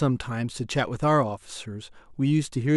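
Nothing goes wrong anywhere in this short bit of speech, so there's no fault to point to.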